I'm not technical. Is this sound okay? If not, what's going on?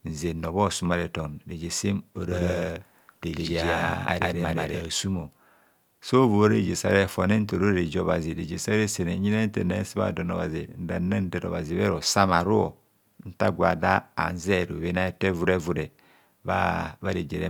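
No, not quite. Right after "reje sem", from about 2.3 to 4.8 seconds, there's a doubled audio track: the same speech plays twice, with a second copy trailing roughly 0.15 seconds behind and about as loud as the first. It sounds like a hard, clean echo, and it switches on and off abruptly. It's likely that the audio got captured a second time through a slower route, or an edit left two copies slightly out of step.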